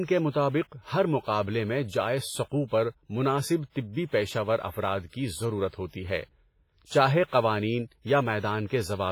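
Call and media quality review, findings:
Heavy WMA compression, throughout the speech. Ringing, washy texture; hiss rising and falling with the signal, smeared over tens of milliseconds around onsets. Likely cause: WMA 1 transform encoder with long blocks, weak spectral lines zeroed, fitting a low bitrate near 24 kbps. Distinguished from band-limiting by content still reaching about 21.5 kHz. Distinguished from noise reduction by hiss that tracks the signal rather than pumping against it.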